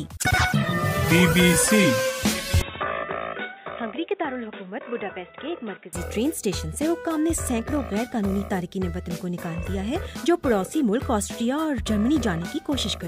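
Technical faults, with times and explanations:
2.62–5.93 s, input switched to a poorer device: the sound abruptly turns dull and boxy, losing everything above 3.8 kHz. It drops about 10 dB and gains faint new background noise, with no gap at the switch, likely from a narrower-band microphone or headset profile.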